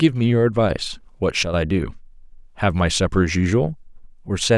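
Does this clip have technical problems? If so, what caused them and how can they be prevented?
Yes. From 1.43 to 1.54 s the speech and its background noise drop together by about 6 dB in a single step, then return. This sudden gain jump was likely caused by a digital gain change applied instantly, with no ramp. Ramping gain changes over several milliseconds prevents it.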